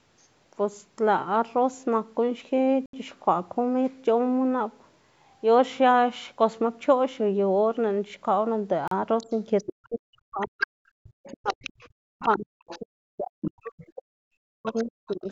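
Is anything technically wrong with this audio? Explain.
Yes. The speech has four kinds of fault, all in the call path.

Bluetooth stall: The sound cuts to silence twice. The first gap runs from 2.86 to 2.93 s and lasts 74 ms. The second runs from 8.88 to 8.92 s and lasts 36 ms. Each time the speech stops dead, then resumes. The likely cause is radio interference delaying packets to wireless headphones. Their buffer empties, so playback halts. It restarts once the resent packets arrive.

Other side's voice leaking through: A second voice sits under the talker. It appears from 9.18 to 9.86 s and from 10.41 to 12.79 s. It returns from 13.45 to 13.85 s and from 14.65 s to the end. It is roughly 10 to 20 dB below the main speech. This is likely residual echo. The far side plays from a loudspeaker, and the echo canceller fails to strip all of it from the microphone.

Speech suppressed in double talk: The talker's voice dips and breaks up while the other voice is present. 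This happens from 9.24 to 10.69 s, for under a second in total. It happens again from 11.37 to 15.28 s, for about three seconds in total. The deepest drops are around 40 dB. Both sides are likely talking at once here. The canceller cannot tell the talker from the echo, so it turns everything down.

Background gated by the echo canceller: The room sound drops out briefly from 10.97 to 11.04 s. The gap lasts 70 ms and falls by about 40 dB. The canceller clamps the microphone hard while the loudspeaker is active. The background then returns when the canceller releases. The call's microphone processing, with nothing above 8 kHz, is normal and not a fault.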